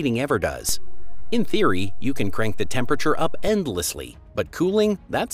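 At 0.69 s the waveform's zero line jumps to an offset of about -19 dBFS, a DC step that holds until 3.48 s and then drops back. Each edge is heard as a low thump while the sound itself carries on unaffected. On the waveform the whole trace visibly rides above or below centre between those two times. On a spectrogram each transition shows as a brief vertical smear concentrated at the lowest frequencies, with nothing sustained between them.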